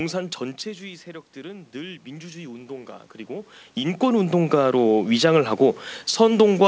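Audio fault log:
0.78–6.62 s, automatic gain rising: the voice and the room noise behind it swell together, slowly and steadily, over almost six seconds rather than settling quickly. When the talker moved away from the microphone, the input fell by about 11 dB. The automatic gain control judged the level too low and raised its gain by about 10 dB. Because it amplifies everything in the signal, the background rises along with the voice, heard through the call codec's 8 kHz top end.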